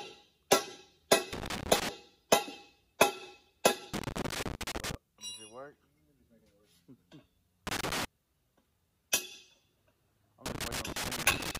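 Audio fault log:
1.33–1.89 s, 3.94–4.95 s, 7.67–8.05 s, 10.46 s to the end: loose connector crackle. Four irregular bursts of scratchy crackle, lasting about 0.4 to 1.1 s each. A worn or dirty contact is rapidly making and breaking, chopping the signal.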